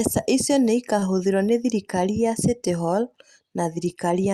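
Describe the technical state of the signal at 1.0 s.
At 1.0 s, right after "icio nĩ", there's a short stall from a late packet, 0.99 to 1.04 s. The jitter buffer ran dry, so the receiver held the last sound about 25 ms before resuming at "nĩ thirikari ya". Nothing's lost, just a slightly stretched moment with a faint buzz or dip.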